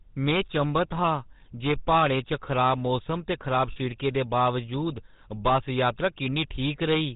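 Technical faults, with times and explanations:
Throughout, hard clipping: the speech is driven about 11 dB past what the chain can pass, so roughly 2 percent of samples hit the ceiling and are sliced flat. The waveform shows squared-off peaks, and the spectrogram shows vertical smears of high harmonics on loud syllables, heard as crackly harshness.
Throughout, GSM full-rate codec: the voice is rebuilt from a vocal-tract model fed by sparse, evenly spaced pulses, giving a plainly audible buzzy, gravelly roughness consistent with 13 kbps full-rate coding. On a spectrogram, energy stops sharply at 4 kHz, with coarse, grainy harmonic structure below it.
3.72 to 3.78 s, lost GSM frames: about 40 ms of sound is missing, which fits two lost 20 ms frames, and the decoder repeats the last good frame's settings. This gives a brief metallic ring. The spectrogram shows frozen, repeated spectral bands there.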